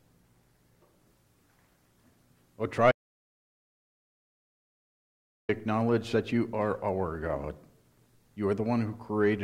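An audio dropout to silence runs from 2.92 s to 5.49 s, about 2.57 s of sound lost outright. The sound is cut off mid-flow and returns just as abruptly, and the gap between is silent with no room tone beneath it. The input feed was likely interrupted, by a lost connection, a failed link or an accidental mute, while recording carried on writing silence, so whatever occurred during those seconds is unrecoverable.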